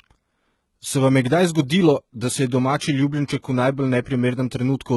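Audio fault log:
Throughout: HE-AAC compression, likely at a low bitrate near 16 kbps. Damage is heavy and nothing is heard above 11.8 kHz. Treble is rebuilt from lower bands, so sibilants sound gritty and metallic.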